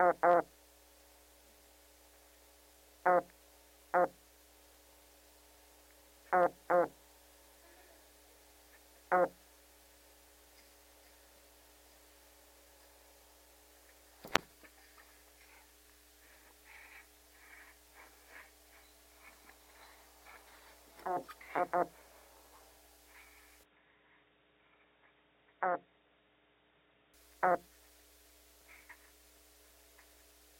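At 23.64 s the sound abruptly goes dull and boxy, nothing above 3.8 kHz, a few dB quieter, with a faint new noise floor, then clears at 27.14 s. There's no gap at either switch, so it's likely the input switched to a poorer device.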